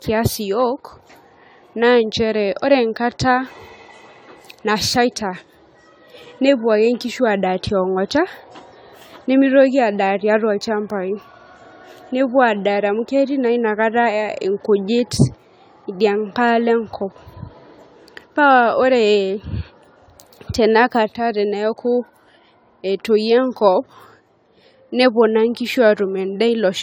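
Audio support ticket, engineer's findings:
Generation loss throughout the speech: swirly, hollow, smeared tone with blurred consonant onsets, worse than a single AAC-LC pass near 96 kbit/s would give. Likely cause is around ten lossy re-encodes. Spectrogram shows accumulated holes, smeared transients and no content above 19.9 kHz.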